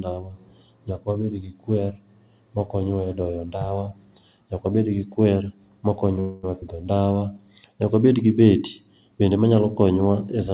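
From 6.20 to 6.45 s the speech stops moving and the last sound trails on as a fading buzz or hiss for about 230 ms, then resumes exactly where it left off with nothing lost. This call audio freeze is likely delayed packets draining the jitter buffer, so the receiver stretched the final sound until they arrived.

Between 6.61 and 6.64 s playback jumps abruptly forward, with only a tiny splice joining the two sides and roughly 70 ms of speech gone. This skip ahead means a stretch of audio was dropped while later audio was already waiting.

From 6.94 to 7.19 s the speech drags, running at about 83% speed with unchanged pitch and drawn-out sounds. This jitter buffer slow-down adds 50 ms by repeating single pitch periods or bits of pauses to rebuild its reserve. Throughout, nothing above 4 kHz is heard, which fits a G.711 mu-law call path.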